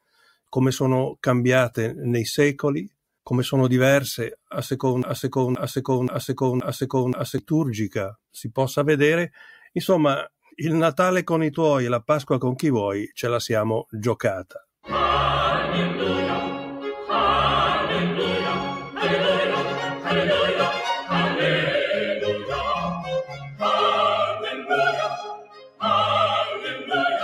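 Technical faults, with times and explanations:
Throughout: noise suppressor applied to music or sounds. A suppressor built for speech stays engaged and keeps misjudging steady, sustained parts of the sound as noise, pulling them down by around 5 dB while sharper onsets pass. The level breathes and held material thins, then recovers. Unlike a compressor's pumping, the swings follow how steady the sound is rather than how loud it is, and tails are what suffer.
5.03–7.38 s: broken-record loop. A fragment of about 0.53 s plays four times back to back, identical each pass, and whatever should have filled those two-plus seconds never arrives. This most likely comes from the player, encoder or stream stalling and resending the last piece it held. Exact repetition at a fixed interval separates it from an echo or delay, which would decay and blend with new sound rather than replacing it.
0.01–0.49 s, 23.24–23.62 s, 24.46–24.70 s, 25.15–25.83 s, 26.50–26.92 s: sound cut by the noise suppressor. 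In these spots the suppressor clamps down much harder than its background swing. The drops reach about 20, 14, 10, 22 and 10 dB respectively, each lasting between a fifth of a second and nearly three-quarters of a second. Sustained or decaying portions sink or have their decay cut short while attacks survive, unlike a dropout, which silences everything at once.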